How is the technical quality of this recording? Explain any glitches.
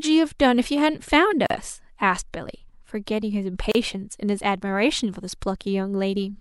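Two brief dropouts interrupt the speech. At 1.46 to 1.50 s and 3.72 to 3.75 s, a gap at a join of encoded pieces opens gaps of about 38 ms and 33 ms. Separately encoded segments kept their untrimmed start delay and end padding. The speech stops, then resumes where it left off.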